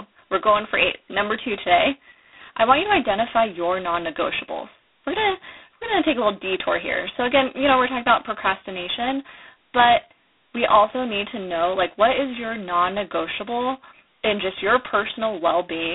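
From start to finish the speech goes through G.726 ADPCM. Each sample is sent as a tiny coarse step from a prediction, and the harsh, rasping hiss riding on the voice's level points to the 16 kbit/s rate. It sounds narrow and boxy, roughly 300 Hz to 3.6 kHz, with nothing above 3.9 kHz.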